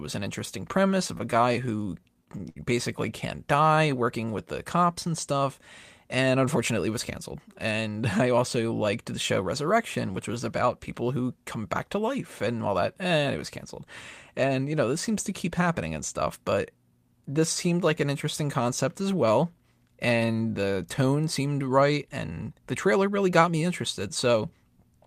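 Repeated stalls (stutter) run from 1.07 to 2.57 s. Packets arrived late, so the jitter buffer kept draining. The receiver stretched the last sound across 13 brief gaps, the longest 62 ms, filling 179 ms in all. Nothing is lost, but the speech drags and stutters.

Jitter buffer slow-down follows from 3.36 to 4.31 s. To rebuild its reserve, the receiver repeated individual pitch periods and slivers of pause, adding 110 ms. The speech plays at 89% speed at unchanged pitch, so sounds feel drawn out.

Jitter buffer speed-up occurs from 6.27 to 7.88 s and again from 23.08 to 23.50 s. With too much audio queued, the receiver repeatedly cut out pitch-period-sized pieces, about a tenth of a second in the first stretch and a few tens of milliseconds in the second. The speech runs at 106% and 108% respectively, hurried but at the same pitch.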